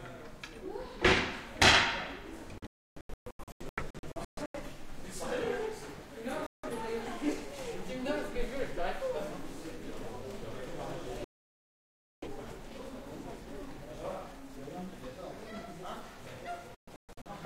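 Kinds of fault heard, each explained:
Digital broadcast dropout: the receiver mutes on lost frames, leaving four silent stretches, two fragmented, seen as flat waveform gaps and blank spectrogram columns.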